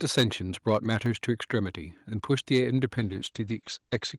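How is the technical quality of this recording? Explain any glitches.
Rough in places, with four kinds of fault stacked into about four seconds of speech.

The opening peak at 0.17–0.23 s is a microphone overload. It sounds crunchy and harsh, about 7 dB past the converter's limit with a good share of samples flattened. The likely cause is input gain set too hot for the converter.

Right inside that burst, at 0.21 s, the level drops by about 2 dB in one step, voice and background together. That's a microphone volume step-down, likely the call software turning the input down after detecting clipping.

Between 0.84 and 1.71 s there are five CD scratch ticks, each a tiny click or gap of a couple of milliseconds at most. A scratch is wiping out more data than error correction can rebuild on each rotation, so the player patches or mutes those samples.

At 2.31–2.58 s there's a second, much milder microphone overload, about 1 dB over with only a few samples clipped. 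It adds a faint edge to the loudest moment, again likely from input gain running close to the limit.

From 2.98 s to the end there's a call bitrate drop. The audio turns muffled as the top end falls from 20 kHz to 8 kHz. That points to the encoder going from roughly 48 to 11 kbps and staying low for about 1.2 s.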